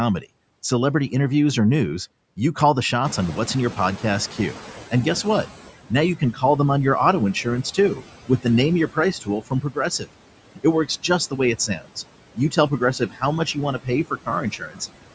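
Throughout the speech there are noise suppressor artifacts. Bands judged to be steady noise are pulled down by about 18 dB frame by frame, leaving a residue that shows as a patchy, flickering noise floor on a spectrogram.

Around 3 s the room noise jumps by about 16 dB, and from 3.04 s the noise suppressor is catching up. Its noise estimate lags, so the louder noise passes first, then sinks by about 13 dB over 2.49 s. This appears as a band fading out by 5.53 s.

Speech cut by the noise suppressor occurs at 5.89 to 6.43 s before "them on your auto", at 7.34 to 8.45 s after it, then at 8.87 to 10.09 s, 10.55 to 11.97 s and 12.36 to 14.81 s. Parts of the speech are mistaken for noise and dropped by about 13 to 19 dB, so the affected speech sounds swallowed or faint. On the waveform these show as notched dips, and on the spectrogram as missing speech energy.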